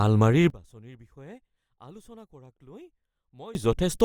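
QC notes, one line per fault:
0.50–3.55 s, one channel inverted: in mono the speech falls by about 26 dB to a faint residue, likely because reversed polarity on one channel cancels the centre.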